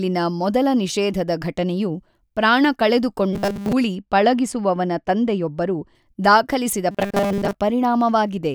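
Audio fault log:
3.33–3.73 s, robotic sound from repeated short buffers: audio likely arrived too late, so a 5 ms chunk was looped while most real audio was skipped, giving a metallic 200 Hz buzz.
3.95–5.95 s, de-emphasis applied wrongly: a treble-cutting de-emphasis filter hit audio lacking pre-emphasis or was applied twice, tilting highs down about 10 dB at 10 kHz, so speech sounds dull and muffled.
6.91–7.55 s, robotic sound from repeated short buffers: with input likely starved again, a 5 ms chunk repeated in place of most real audio, forcing a rigid, metallic 200 Hz buzz.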